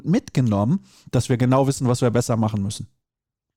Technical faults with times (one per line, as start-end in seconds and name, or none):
none